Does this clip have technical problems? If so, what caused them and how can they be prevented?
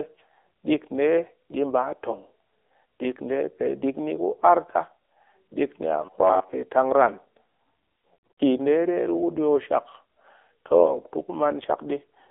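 Yes. AMR narrowband mobile codec damage runs through the whole clip. The speech is squeezed into a line band of about 300 Hz to 3.6 kHz, with nothing above 4 kHz. Its buzzy, synthetic edge fits a low 7.4 kbps mode, where the vocal-tract model gets only a few excitation pulses per subframe and fine detail is lost. Preventing it means carrying the call over a wideband codec or at a higher AMR bitrate.

Robotic sound from repeated short buffers appears from 6.05 to 6.53 s. The speech becomes a rigid, metallic buzz locked at 93.8 Hz that only loosely follows the syllables. The likely cause is playback starved of new audio, repeating the last chunk for most of that stretch. The buzz fits a buffer of about 10.7 ms. Preventing it means giving the audio thread a larger buffer or higher scheduling priority so it never runs dry.

Lost AMR speech frames occur between 8.14 and 8.40 s. About 200 ms of speech is missing across a 240 ms span, and the longest continuous gap is 120 ms. 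There the decoder re-used the last good pitch and vocal-tract settings with falling gain, so the sound smears, drawls and fades before coming back rough. The pattern points to about ten corrupted frames. Preventing it means improving radio coverage or using stronger error protection on the link.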